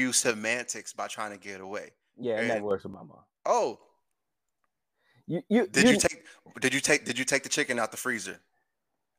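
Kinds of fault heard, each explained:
One channel drops out: the likely cause is one side of the stereo feed losing its signal for a while. Once both channels are summed to mono, the speech they share falls abruptly by about 6 dB. Here it happens three times: from 0.31 to 2.71 s, from 2.94 to 3.81 s, and as a brief dip from 6.09 to 6.25 s. Each time there is a sudden step down in level, then a step back up.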